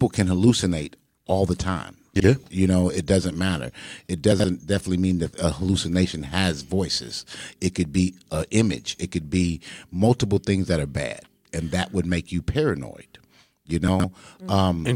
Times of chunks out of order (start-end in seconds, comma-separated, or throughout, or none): 2.16-2.24, 4.32-4.44, 13.88-14.04